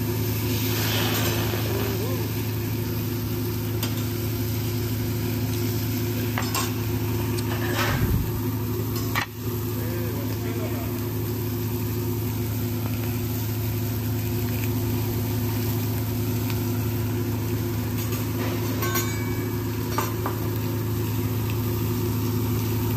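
A sudden voltage step or pulse, likely from a plug, switch, static discharge or driver glitch, gets added to the signal twice, producing a loud pop each time. The first, from 7.89 to 7.91 s, is a single sharp pop standing roughly 5 dB above the sound. The second, from 12.86 to 13.06 s, is two pops in quick succession, louder at around 10 dB over the sound, which continues underneath both.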